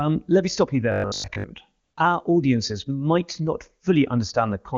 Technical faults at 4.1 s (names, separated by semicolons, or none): none